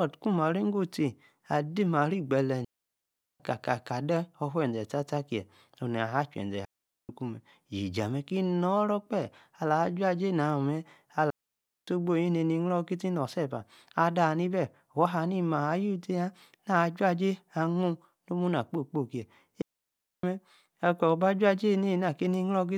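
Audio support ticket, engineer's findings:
Digital wireless dropout at 2.65–3.40 s, 6.65–7.09 s, 11.30–11.88 s and 19.62–20.23 s. Clean near-silent holes of 0.75 s, 0.44 s, 0.58 s and 0.62 s, no noise burst either side. Probable component: digital wireless receiver. Mechanism: link drops too much data, receiver mutes with a very short fade instead of passing corrupted audio.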